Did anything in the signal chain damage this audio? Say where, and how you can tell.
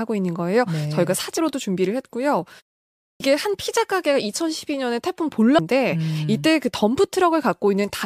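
Yes. At the playback stage the output device appears to drop into a low-power state during a pause of about 0.43 s and is slow to wake. The clipped start after a pause swallows roughly 0.24 s of sound from 2.96 to 3.20 s, so speech resumes abruptly, missing its onset.

At the codec stage there is damaged data in the compressed stream at 5.58 s. The decoder hits corrupted bytes, misreads or discards that frame and resynchronises on the next header, leaving a brief glitch in the speech.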